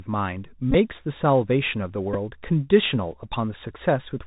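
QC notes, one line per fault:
Throughout: Bluetooth CVSD headset codec. The link carries a one-bit up/down stream whose step size adapts, which fits a 64 kbps CVSD headset path. Nothing above 4 kHz survives, s sounds come out scratchy, and a granular hiss sits plainly under the speech.
0.71–0.75 s and 2.13–2.16 s: Bluetooth headset packet repeated. Lost voice packets were replaced by replaying the last good packet's bits. At 0.71 s about 30 ms is lost across 37.5 ms, with the longest run around 20 ms, giving a short buzz near 267 Hz from the 3.75 ms repeat. At 2.13 s about 11 ms is lost, heard as a brief buzz.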